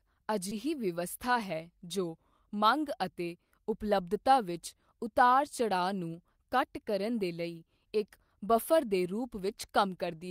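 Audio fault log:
0.49–0.53 s, short concealed packet loss: a 20 ms gap was filled by extending the preceding speech, leaving a brief smear rather than a dropout's silent hole.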